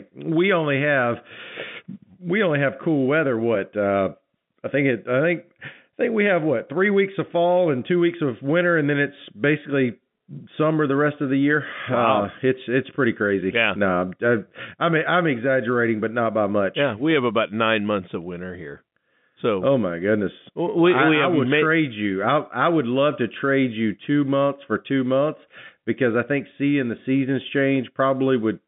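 At 16.89 to 17.13 s, a loud pop cuts through the speech as two sharp pops close together, a little louder than the voice. The speech carries on underneath. A sudden voltage pulse, likely from a plug, switch or static discharge, entered the telephone-band signal.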